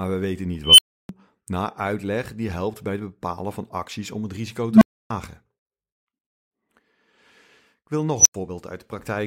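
Speech with an unstable filter blowing up three times: after "we weten niet" at 0.64 s (a roughly 3 kHz squeal), after "acties om het risico" at 4.69 s (a low tone around 200 Hz), and at 8.18 s (around 7 kHz). Each one swells over 0.07 to 0.14 s into clipping, then drops to silence for 0.09 to 0.31 s. That's a recursive filter running away until its output overflows and resets.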